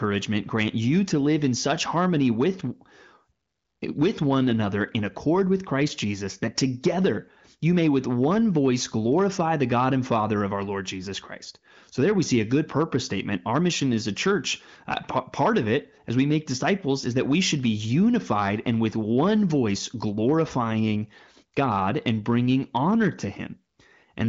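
Speech with hard clipping throughout: the peaks were driven about 7 dB past what the signal path could pass, so roughly one percent of samples are cut flat. It is heard as crackle on the loudest syllables. Unlike soft saturation, the flattened tops add harsh high harmonics. The clip's band edge near 7.5 kHz comes from the wideband phone coding, which is clean and adds none of the raspiness of a low-rate codec.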